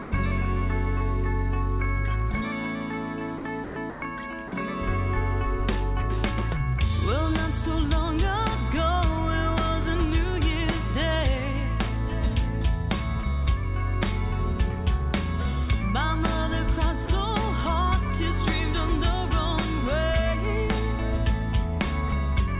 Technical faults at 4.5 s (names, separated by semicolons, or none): sound dropped by the voice detector